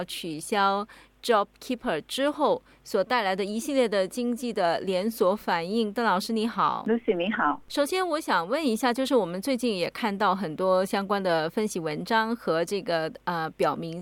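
No technical faults occur anywhere in the audio, so there is nothing to describe in time order.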